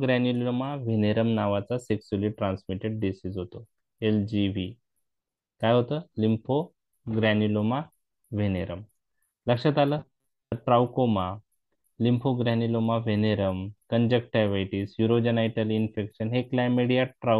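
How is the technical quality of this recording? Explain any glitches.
The recording has one clear glitch: robotic sound from repeated short buffers, from about 9.99 to 10.53 s. For roughly half a second the sound turns into a rigid, metallic buzz at 134 Hz that still loosely tracks the underlying audio. The likely cause is new audio arriving too slowly, so playback keeps re-sending a slice of about 7.5 ms, which sets the buzz pitch, while most of the real audio in that stretch is skipped. Unlike a dropout or stutter, the sound never goes silent or jumps back audibly. It keeps going on a fixed mechanical pitch.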